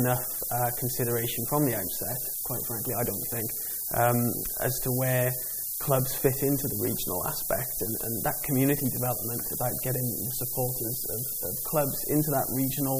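From start to finish the audio carries low bit depth with noise shaping. With only 5 bits, rounding error is large, and error feedback pushes it toward high frequencies, so a steady, thin hiss rises sharply up the band, roughly as loud as the sound itself.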